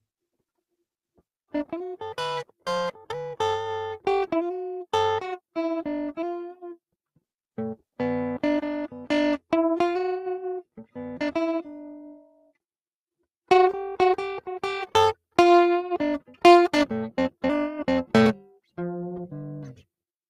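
From the first moment, the music carries overlap-add ripple. The processing split the audio into windowed frames and rebuilt it with overlaps that do not sum to a steady gain. So the level pulses once per frame, at around 300 Hz, with a depth of about 11 dB. At that rate it is not a slow wobble. It sounds like a metallic buzz with extra tones around each note, laid over every part of the music.

From 12.15 to 12.52 s, the noise suppressor cuts part of the sound. It mistook musical material for noise and pulled it down harder than the rest. The level sinks by up to about 17 dB over roughly 0.4 s. Sustained and decaying parts lose the most. They thin out or stop early.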